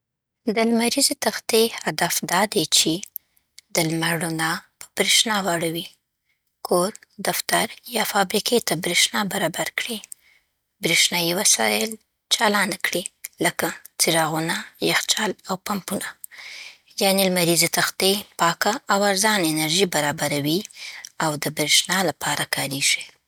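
Listening to the speech from beginning to end, nothing stood out as a technical problem.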